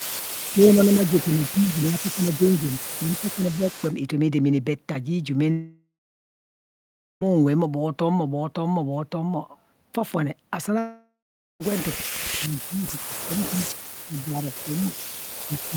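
From 0 to 0.52 s, and again from 0.88 to 3.95 s, there is an echo leak: a faint copy of the speech trailing by 304 ms, about 20 dB below the main signal. This is likely a far-end loudspeaker echo that the echo canceller failed to fully remove and sent back. Overlapping this, speech is suppressed in double talk from 0.54 to 2.41 s, with roughly a second of dips reaching about 10 dB, and from 2.8 to 3.66 s, with shallower dips of about 5 dB over a shorter span. The talker's level sags in pieces, likely because the canceller could not separate local speech from echo and attenuated both.

A long network dropout runs from 5.51 to 7.23 s. About 1.7 s of audio is lost, and a decaying fill sound gives way to roughly 1.3 s of silence. A second dropout, from 10.79 to 11.62 s, loses about 0.82 s and leaves around 0.45 s of silence. In both cases packets likely stopped arriving, and the audio resumes with the missing section gone.

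From 11.95 s to the end, double-talk suppression returns much harder, with the speech cut by up to about 35 dB.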